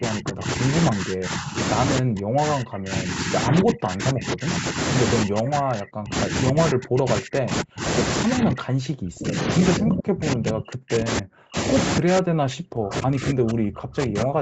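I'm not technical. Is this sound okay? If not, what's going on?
No. The speech keeps sinking or breaking up, in six stretches: 0 to 0.73 s, 0.89 to 1.58 s, 2.0 to 4.79 s, 5.24 to 7.84 s, 8.25 to 11.56 s and 11.99 to the end at 14.4 s. The first two are milder dips. From 2 s on, the voice is pushed down almost to nothing. This is likely speech suppressed in double talk: both sides spoke at once, and the call's echo canceller mistook this talker for echo and turned them down.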